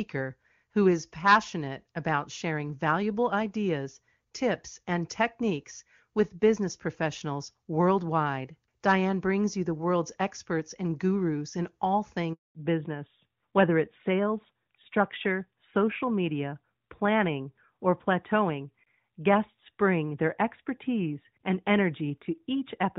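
At 12.33 s, just after "and gurus in all", a handover gap silences the sound for 220 ms, showing as a flat waveform and a blank spectrogram column. From 12.55 s to the end, the audio falls back to narrowband: the earlier HD Voice quality fits high-rate AMR-WB, but now everything above 4 kHz disappears, leaving a hard spectrogram ceiling and a duller sound.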